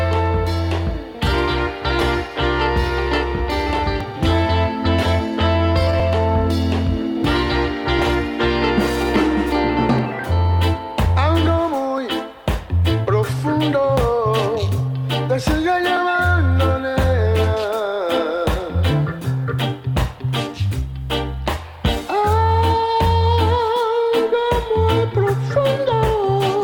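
Overlap between stream segments occurs at 2.01, 4.01, 6.00, 7.99, 9.99, 11.98, 13.97 and 15.97 s. At each 2-second segment joint, overlapping time stamps cause roughly 10 to 15 ms of audio to be trimmed away. The waveform jumps there, producing a small click or skip.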